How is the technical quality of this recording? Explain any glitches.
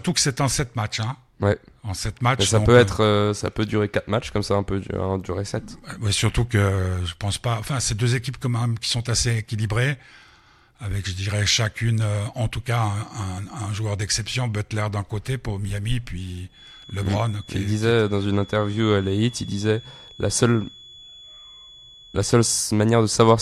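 The recording has one glitch, a feedback whistle. From 16.46 s to 22.68 s a thin, steady tone sits at 3.4 kHz behind the speech. It stays roughly 25 dB below the talking and swells and fades slowly in level. The likely cause is sound from a loudspeaker reaching the microphone and looping back. That loop is poised at the edge of feedback. One frequency keeps ringing but never builds into a howl.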